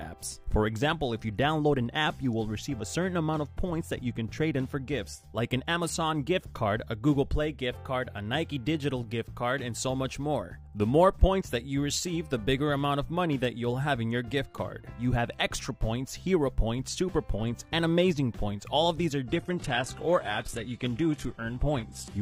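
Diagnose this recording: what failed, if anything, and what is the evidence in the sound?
At the network and codec stage, an adaptive stream at a lower bitrate took over at 19.26 s and ran to 22.22 s. Without any gap, everything above 12.3 kHz abruptly vanishes, which fits a switch from AAC-LC near 96 kbit/s to HE-AAC near 16 kbit/s. A spectrogram shows a sudden flat ceiling there.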